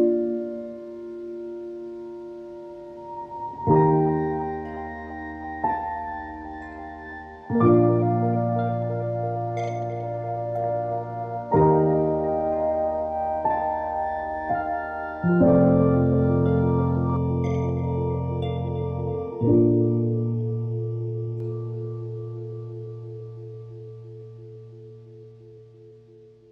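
Channel delay (comb filtering) runs from 17.17 to 21.40 s. One channel trails the other by under half a millisecond, and when both are summed to mono, shared content cancels at evenly spaced frequencies, the first notch near 1.5 kHz, so the sound turns hollow and phasey.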